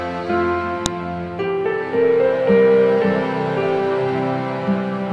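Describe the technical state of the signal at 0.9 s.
At 0.86 s there is a file header played as audio. A WAV piece that was joined or streamed kept its header, and those few dozen bytes were read as samples. The result is a brief, sharp, loud click that cuts through the sound.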